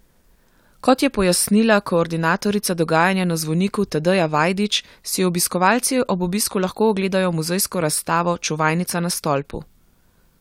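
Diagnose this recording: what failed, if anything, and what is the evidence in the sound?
Nothing in the recording points to a failure at any stage between capture and playback. No event anywhere in the speech marks a break in the chain that would need tracing.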